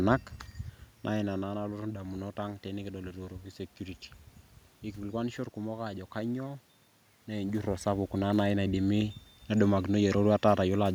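Nothing stood out on listening to the recording.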